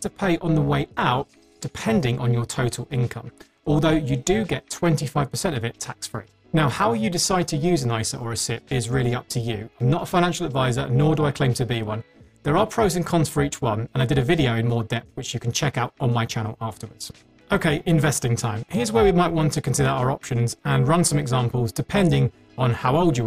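From start to finish the clip carries overlap-add ripple. The audio was split into windowed frames and rebuilt with an overlap whose gains do not sum evenly, so the level swells and dips about 11 dB once per frame, around 300 times a second. At that rate it sounds like a metallic buzz rather than a tremolo. A waveform shows a regular comb-like envelope, and a spectrogram shows sideband copies spaced about 300 Hz around every component.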